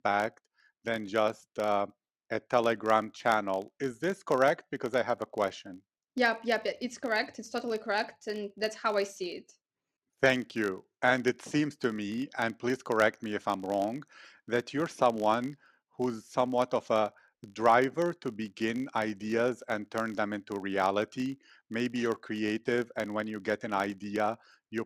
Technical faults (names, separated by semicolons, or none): filter restarted on every block